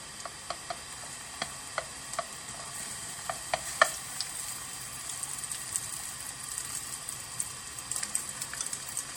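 Throughout the clip, a low-bitrate MP3 was likely re-saved at a high bitrate, so the larger file keeps the earlier encoding's losses. Nothing sounds above 18.3 kHz, and the first pass's artefacts remain, consistent with roughly 64 kbit/s source material.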